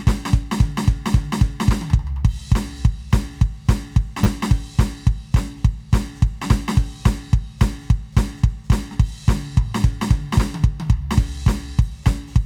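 At 4.24 to 4.26 s audio arrived late, so a repeated buffer played twice more, making a hard-edged buzzy click that fits a 10 ms buffer.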